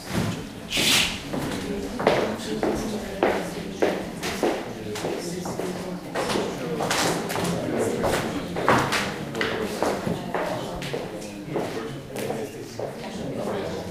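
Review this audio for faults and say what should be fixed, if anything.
No faults are audible in this audio, so nothing needs to be fixed.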